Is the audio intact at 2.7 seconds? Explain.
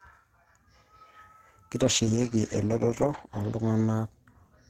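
No, 2.7 s sits inside a call bitrate drop running from 1.87 s to the end. Bandwidth estimation starved the encoder, so the speech turns coarse, watery and muffled with the highs gone, which fits a bitrate falling from about 64 to 11 kbps.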